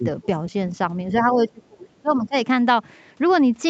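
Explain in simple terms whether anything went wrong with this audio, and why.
Speech suppressed in double talk, from about 1.11 to 2.35 s: for roughly a second in that stretch, the talker's speech sinks sharply, at its deepest to near silence, and comes back in patches. This is likely because both ends of the call were talking at once. The call's echo canceller couldn't tell the talker's own speech apart from the other side playing through the loudspeaker, so it turned everything down together.

The other side's voice leaking through, from about 2.09 to 2.28 s: a faint second voice slips in, much quieter than the talker, for about a fifth of a second. This is likely because the echo canceller failed to remove all of the loudspeaker sound that the microphone picked up. The leak falls inside the stretch where the talker is being turned down, so both problems come from the same moment of overlapping talk.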